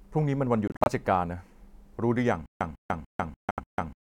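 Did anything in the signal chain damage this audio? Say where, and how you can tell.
Yes. Bluetooth dropout at the wireless link: short silent holes between 0.68 and 0.88 s, and again at 3.51–3.60 s. Sound resumes further on without repeating, likely from late packets being discarded.

Stutter with silent gaps at playback, from 2.46 s to the end: the same 148 ms fragment returns every 294 ms with silence between, likely a stalled player replaying its last buffer.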